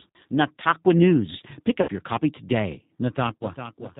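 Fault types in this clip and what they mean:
G.729 codec: The whole clip runs through this 8 kbit/s VoIP codec, and the damage is easy to hear. It doesn't send the waveform. It sends a rough model of the vocal tract, a pitch guess and a handful of pulses per frame, and the far end rebuilds speech from those. So everything above 4 kHz is gone, the speech sounds dull and boxy, and there's a rough, slightly synthetic edge all the way through.
VoIP packet loss concealed by the speech codec: There are two dropouts. The first runs from about 1.82 to 1.90 s, with roughly 60 ms missing, which fits two lost packets. The second runs from about 3.38 to 3.45 s, with 30 ms missing, which fits one. In each gap the decoder keeps going on its last pitch and filter settings and turns the gain down, so the speech smears into a fading buzzy tone or coloured noise instead of cutting to silence.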